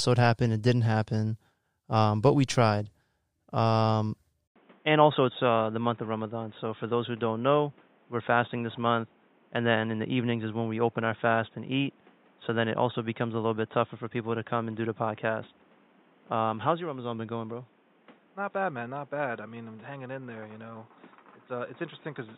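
At 4.48 s the sound cuts out for 80 ms, and when it returns the speech has changed character for the rest of the clip. Nothing reaches above 3.8 kHz, so it turns dull and boxy. The level drops by about 5 dB. A new noise floor appears, roughly 30 dB below the speech. This is likely an input switched to a poorer device in mid-recording. The narrower band, new tone and different noise all come from that change.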